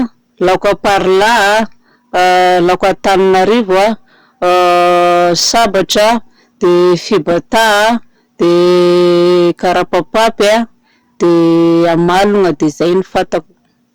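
Speech, with hard clipping throughout. The level is driven about 17 dB past what the stage can pass. Roughly a third of samples are flattened, giving harsh fuzz on every loud sound.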